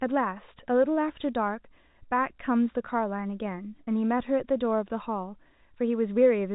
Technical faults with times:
3.84-3.87 packet loss with pitch repetition

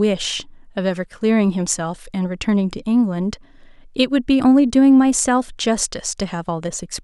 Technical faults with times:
none

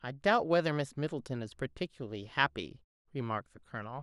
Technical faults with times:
none

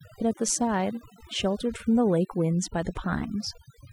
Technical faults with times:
0.00-3.92 overdone noise removal

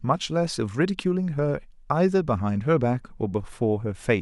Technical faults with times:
2.57-4.22 mains buzz

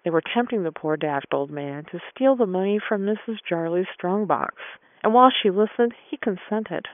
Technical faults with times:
none

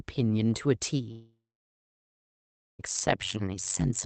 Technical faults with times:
1.11-2.81 long network dropout
3.06-4.06 overlap-add ripple

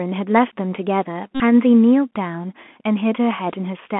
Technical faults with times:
0.00-3.99 Bluetooth CVSD headset codec
1.35-1.40 Bluetooth headset packet repeated

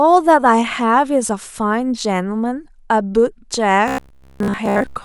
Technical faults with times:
3.88-5.05 robotic sound from repeated short buffers

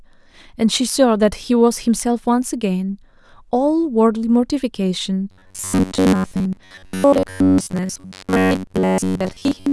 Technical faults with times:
5.31-9.72 robotic sound from repeated short buffers

